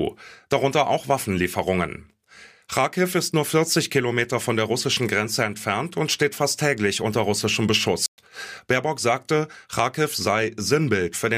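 At 8.06 s, right after "fast täglich unter russischem", the player likely ran dry of buffered data or had its output thread held up, producing a playback stall. Nothing reaches the output until it recovers, so the speech cuts to silence for 120 ms, ending at 8.18 s. The speech stops abruptly mid-phrase, leaving a short, unnatural hole with no fade, before the voice picks up again.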